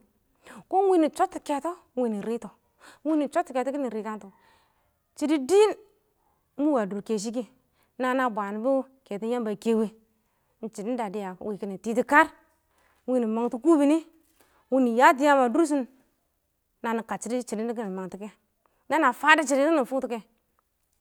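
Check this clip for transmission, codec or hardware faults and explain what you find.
Nothing in the recording points to a transmission, codec or hardware fault.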